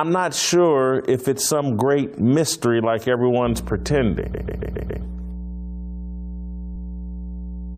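From 3.44 s, just after "some great mystery like", a steady low 60 Hz drone sits under the speech to the end, fairly loud at roughly 10 dB below it: mains hum from a ground loop or nearby transformer. At 4.33 to 5.03 s the audio stutters, replaying one 139 ms block five extra times, and again at 6.75 to 6.89 s with one extra replay. These are repeated frames, a run of compressed frames delivered more than once and decoded again.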